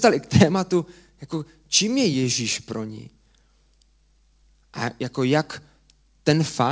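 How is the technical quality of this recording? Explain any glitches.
Nothing stood out as a glitch on listening to this speech, which comes through a call path whose sound points to a G.722-type codec, with nothing heard above about 8 kHz.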